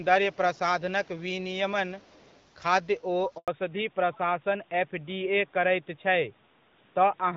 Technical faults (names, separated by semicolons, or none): handover gap; fallback to narrowband